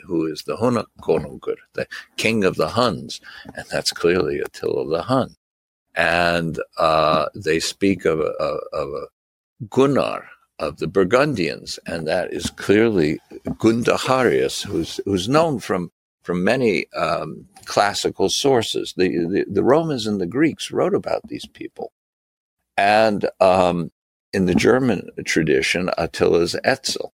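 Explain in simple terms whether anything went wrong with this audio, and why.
At 8.39 s the sound jumps forward. This is compressed frames skipped: one chunk of the compressed file, about 26 ms long, was missing or rejected as damaged, so roughly three hundredths of a second never played.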